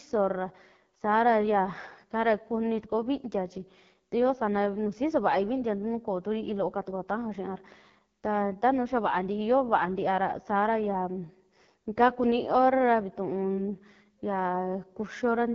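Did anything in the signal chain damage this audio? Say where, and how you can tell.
Yes, at the codec stage. The AMR wideband (HD Voice) codec makes the speech rough and raspy throughout, with nothing above 7.3 kHz. The damage fits its 8.85 kbit/s mode.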